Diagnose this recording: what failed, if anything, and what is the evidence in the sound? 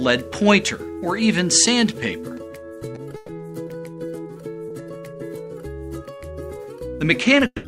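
Two call audio freezes occur at the network and jitter-buffer stage. From 3.16 to 3.31 s the last sound is carried on as a fading buzz for about 120 ms, then the audio resumes where it stopped, nothing lost but everything after it shifted 120 ms later. From 7.46 s to the end, 180 ms is filled the same way, the last 50 ms decaying to silence. The likely cause is packets held up in transit until the buffer ran dry.

A short stall from a late packet sits at 4.68 to 4.73 s, also at the network and jitter-buffer stage. One packet missed its playout deadline, so the receiver stretched the preceding sound by 20 ms, heard as a brief held sound with a slight buzz, until the packet landed. Playback then continued from the same point, with no audio missing and a 20 ms increase in delay.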